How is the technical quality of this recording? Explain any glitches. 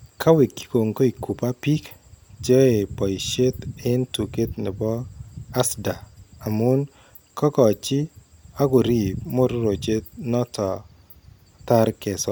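No technical glitches can be heard: the signal stays intact and continuous, with nothing that points to a fault in the recording or playback chain.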